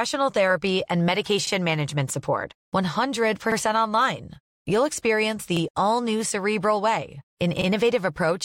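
At 1.47–1.52 s, between "therapy and" and "management support", then at 3.52, 5.57 (before "all new") and 7.61 s, overlapping chunks replay about 48 ms at each 2-second join, a regular stutter-click; waveforms show duplicated segments, spectrograms vertical seams.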